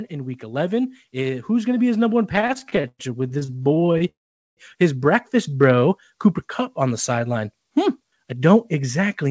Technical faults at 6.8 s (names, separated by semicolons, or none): none